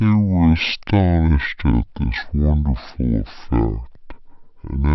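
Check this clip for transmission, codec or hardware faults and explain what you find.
One fault runs throughout: a wrong sample rate. The speech plays at half speed and a full octave low, which fits audio recorded near 44.1 kHz being played back at 22 kHz without conversion. Because pitch and tempo fall together by the same ratio, this is a rate mismatch, not time-stretching or pitch-shifting.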